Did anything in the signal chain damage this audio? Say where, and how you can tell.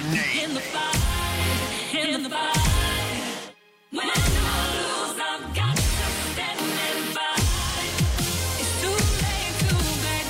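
Yes. From 1.4 s to 5.12 s the sound is heard twice, a second identical, full-band copy trailing the first by roughly a tenth of a second and arriving at about the same loudness. It has no reverberant tail or room colour, and it switches on and off abruptly at those two points, which marks it as a doubled audio track rather than an acoustic echo. The likely cause is the signal being captured a second time through a slower routing or buffer path.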